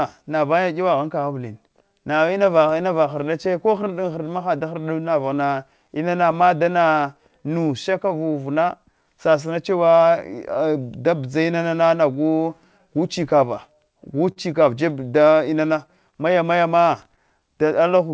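Clock drift between sender and receiver runs through the whole recording: the sender's clock is about 5% slower, so the receiver's jitter buffer keeps draining. From 0.23 s to 17.98 s, repeated timing corrections stretch the speech by repeating short pieces. Playback runs at 96% speed and adds roughly 0.7 s overall, a stretching spread across the whole span rather than concentrated in distinct dropouts.

Between 3.45 s and 6.34 s, scattered short gaps appear: about five lost packets, each patched by extending the last sound for no more than about 10 ms. They come as isolated brief ticks, not as the steady stretching of the drift.

From 12.78 s to 17.90 s, about seven more gaps appear, with concealment up to roughly 40 ms. These sit over the G.722 call sound, which has nothing above 8 kHz.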